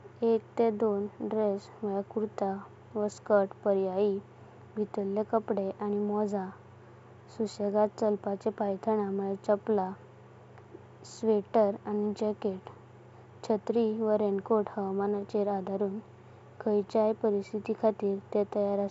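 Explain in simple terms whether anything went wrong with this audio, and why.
Nothing went wrong with the signal: the speech passed through ordinary G.722 wideband telephone coding, which is why the sound stops at about 7.7 kHz, and any trace that coding leaves behind is faint at most.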